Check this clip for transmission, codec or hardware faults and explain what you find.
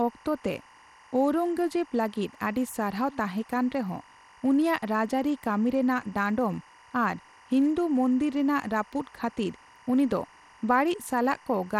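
Two faults run through the whole speech recording.

Timecode bleed, throughout: linear timecode at 24 frames per second leaks in from a neighbouring line, a square wave flipping between roughly 1 and 2 kHz, heard as a steady chirping warble about 30 dB under the speech.

Bluetooth SBC compression, throughout: most likely SBC's coarse sub-band quantisation at a small bit pool, fitting roughly 96 kbps, leaves plainly audible grit and flickering treble, with nothing above 17.2 kHz.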